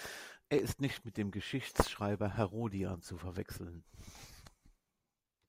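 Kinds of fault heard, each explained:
Loud pop: Two single sharp pops sit on top of the speech, one at 0.59 s just before "ist nicht mit dem" and one at 1.87 s just after it. Each peaks roughly 10 dB above the speech level while the talking continues underneath. The likely mechanism is a brief voltage step or pulse from a switch, plug, static discharge or driver glitch entering the signal path, which the downstream circuitry shapes into a short, hard thump.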